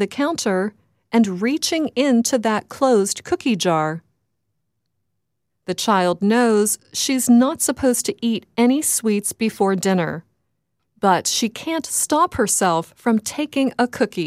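At 9.48 s and 11.36 s there are small skips, likely a dropped buffer (overrun) losing about 5 ms each, seen as abrupt waveform discontinuities and thin vertical spectrogram lines.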